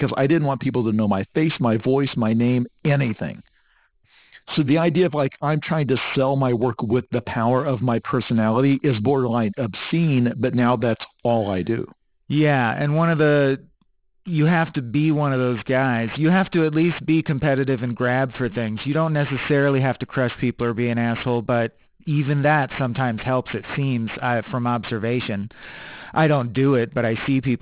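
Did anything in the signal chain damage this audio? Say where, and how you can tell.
Yes, at a sample-rate conversion stage. The whole speech clip has aliasing: sibilants sound gritty, with energy running right up to a 4 kHz edge, which fits a drop to 8 kHz with no anti-alias filter. Content above 4 kHz folds back down, sitting roughly 20 dB under the speech.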